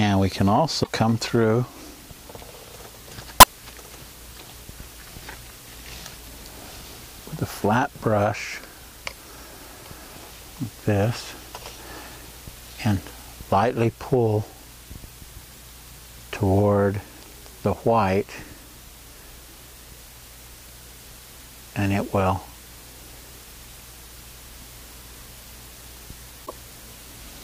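Brief bursts of damaged data in a compressed stream break into the audio three times: at about 0.80 to 0.89 s, 3.38 to 3.47 s, and 26.42 to 26.52 s, each roughly a tenth of a second. Corrupted bytes make the decoder misread frames and lose sync until it finds a valid header, producing a chirp, squawk, click or short hole. On a spectrogram each shows as a narrow vertical break; the waveform shows an abrupt, discontinuous patch.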